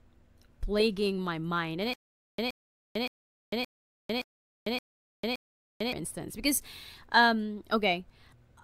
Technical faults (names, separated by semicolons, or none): stutter with silent gaps